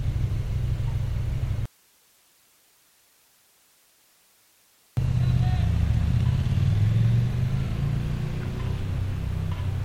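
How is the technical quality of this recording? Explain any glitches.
The recording has one clear fault: an audio dropout to a faint residue from 1.66 s to 4.97 s, lasting about 3.3 s. The sound cuts off abruptly mid-flow and returns just as suddenly, with only hiss around 35 dB below the normal level filling the gap. It is likely that the source signal was interrupted while the downstream recording path stayed live, so that path's own noise floor is what shows through.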